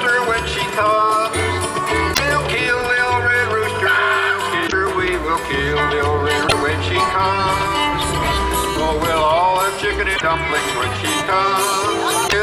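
At 2.10–2.20 s, 4.64–4.73 s, 6.44–6.52 s, 10.12–10.22 s and 12.24–12.34 s, damaged data in the compressed stream breaks through as short squawks or chirps of roughly a tenth of a second each. Corrupted bytes make the decoder misread those frames and lose sync until it finds a valid frame header. On a spectrogram each appears as a narrow vertical block of smeared, unnatural energy; the waveform shows an abrupt, ragged burst with hard edges.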